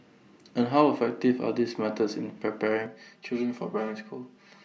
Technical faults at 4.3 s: channel delay (comb filtering)

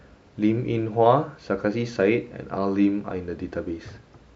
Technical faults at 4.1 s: none

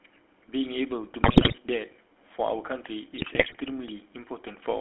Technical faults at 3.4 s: GSM full-rate codec; GSM bit errors

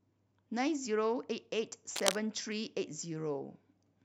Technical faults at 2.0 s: cable scratch noise

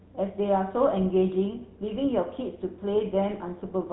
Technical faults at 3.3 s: GSM full-rate codec

